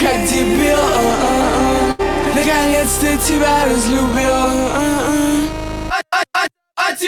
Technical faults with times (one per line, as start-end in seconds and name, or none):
1.91-2.01 burst of packet loss